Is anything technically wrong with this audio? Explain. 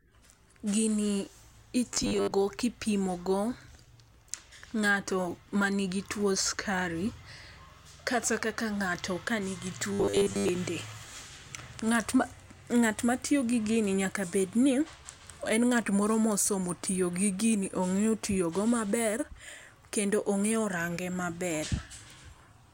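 Yes. Robotic sound from repeated short buffers appears at 1.94–2.33 s and at 9.93–10.49 s, just after "kaka ng'ato ka nigi". Audio likely arrived too late, so 10 ms chunks were replayed in place of about half, then most, of the speech, leaving a rigid, metallic 100 Hz buzz.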